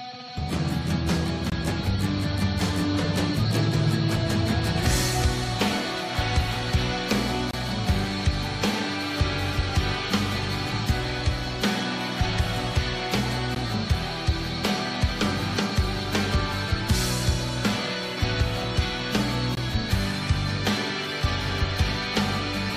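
Hard-edged silent holes break the audio at 1.50–1.52, 7.51–7.54, 13.55 and 19.55–19.57 s, every 6 s: gaps between stream segments, where mismatched timestamps leave silence-filled spaces.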